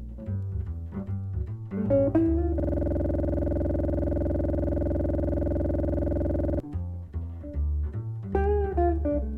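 From 2.60 s to 6.60 s a system hang loop occurs: the host stalled while the audio hardware kept replaying its ring buffer. A 46.4 ms segment repeats at 21.5 Hz, producing a coarse buzzing stutter, which fits a 2048-sample buffer.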